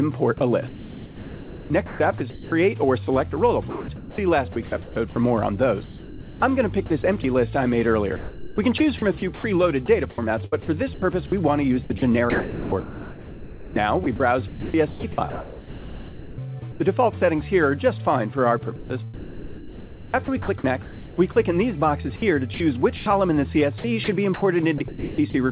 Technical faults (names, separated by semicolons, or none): sound chopped by the voice detector